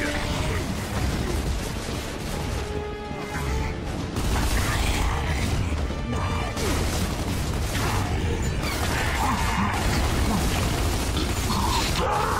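From 0.05 to 9.9 s there's a train of clicks, about 11 a second at an uneven pace, poking a few dB above the sound, likely from interference.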